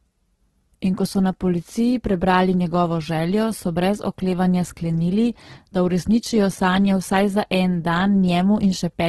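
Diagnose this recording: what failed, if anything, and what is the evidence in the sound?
The codec stage is where this went wrong: it's Opus compression, pushed hard, and it runs through the whole speech clip. Nothing sits above 12.3 kHz, and the band-filling leaves the sound grainy and noisy rather than swirly, which likely fits Opus music mode at around 12 kbps.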